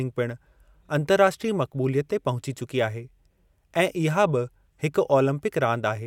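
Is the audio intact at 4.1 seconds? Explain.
Yes, at 4.1 seconds the speech plays through intact, with no dropout, click, distortion or other technical fault audible at that moment.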